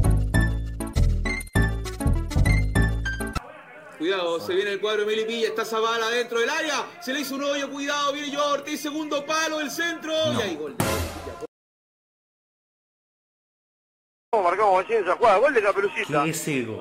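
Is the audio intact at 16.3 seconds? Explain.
Yes, the audio at 16.3 seconds is intact, with no dropout, glitch or other fault at that point.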